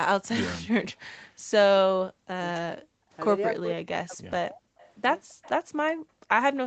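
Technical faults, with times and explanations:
0.99 to 1.54 s and 5.96 to 6.29 s, background gated by the echo canceller: the room sound sinks away, by about 40 dB at its deepest, for roughly a third of a second in each window, then comes back. While the far end's audio was playing out of the loudspeaker, the echo canceller clamped the microphone down hard so nothing of it would return, and the ambience underneath went with it until the canceller released.
1.82 to 2.38 s, 2.78 to 2.97 s and 3.57 to 4.64 s, speech suppressed in double talk: the talker's speech dips and drops out in pieces, falling by around 40 dB at worst, for about half a second in the first span, a brief moment in the second and most of the third. Both ends were likely talking together, so the canceller could not tell this voice from the loudspeaker echo and turned everything down at once.
4.79 to 4.91 s and 5.29 to 5.5 s, echo leak: a faint, delayed copy of the speech surfaces in short scraps, trailing the original by 266 ms and sitting roughly 30 dB below the speech in the first spot and about 25 dB below in the second. 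The far side was likely playing the call on a loudspeaker and its echo canceller left part of what its microphone picked up, which was sent back down the line.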